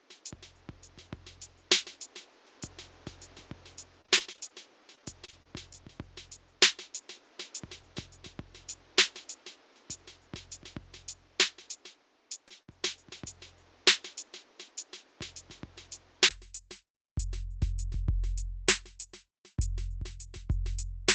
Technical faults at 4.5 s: repeated packet loss (robotic sound)

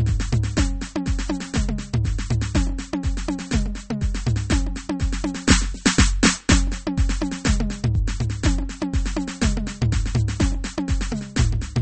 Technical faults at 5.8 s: MP3 compression

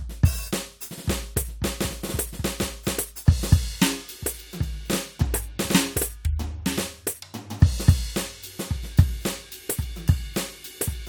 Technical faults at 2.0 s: none

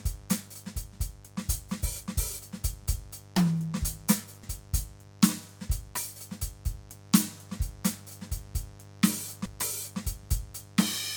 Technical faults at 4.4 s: mains buzz; damaged data in a compressed stream

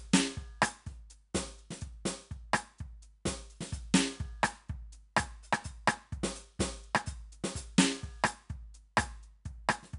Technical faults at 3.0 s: 4-bit ADPCM compression

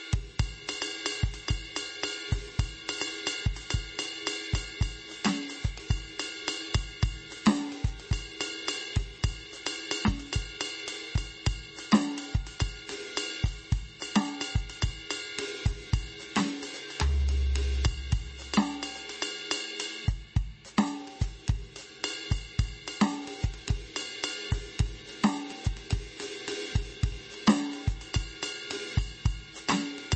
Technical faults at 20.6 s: MP3 compression

